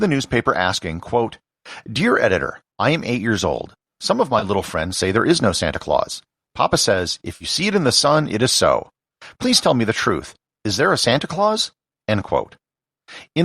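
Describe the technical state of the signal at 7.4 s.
At 7.4 s there is AAC frame loss with concealment, from 7.36 to 7.45 s, just before "see it in the". About 50 ms of coded audio never reached the decoder, which fits a run of several consecutive frames. The decoder filled the gap by reusing and reshaping the last good spectrum. Because the gap is short, the result is a brief smeared, noisy, phasey patch rather than a dropout to silence. The stream itself is likely low-delay AAC.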